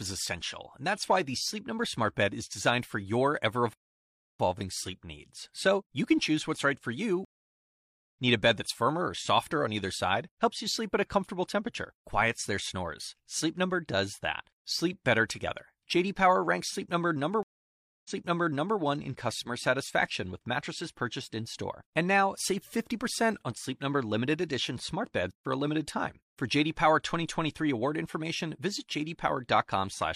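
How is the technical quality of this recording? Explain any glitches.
The recording has three interruptions: one playback stall and two stream reconnects.

At 3.73 s, right after "designed for your ever", the sound cuts out for about 0.66 s and picks up again at 4.40 s with "sleep needs". This is a playback stall, likely from the player's buffer running dry or its output thread being held up. Nothing reaches the output until it recovers, so the flow of speech simply freezes mid-phrase and then carries on.

The two stream reconnects come from the connection dropping and the player restarting its decoder partway through the stream. After "what's right for you" at 7.25 s, there is 0.85 s of silence until 8.10 s, and playback resumes roughly 0.7 s further on, so a short stretch is lost. At 17.43 s, the gap lasts about 0.62 s and the audio resumes 0.74 s earlier than where it stopped, apparently because the server resent a burst, so a fragment is heard twice before 18.79 s.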